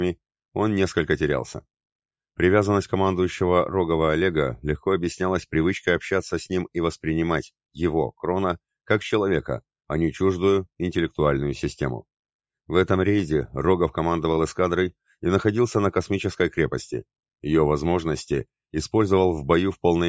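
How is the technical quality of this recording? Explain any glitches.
No glitches to speak of here; the sound has simply come through a call's microphone processing, so there's nothing above 8 kHz and the very lowest bass is trimmed away, which is just what that path normally does.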